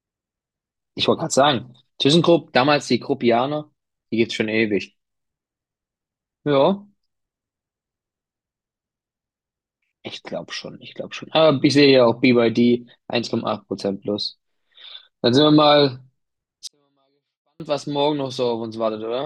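From 16.67 to 17.60 s, a 24-bit alignment error (too quiet) reads low-byte 24-bit samples as 32-bit, dropping the speech about 48 dB: a nearly flat waveform, faint but unchanged spectrogram.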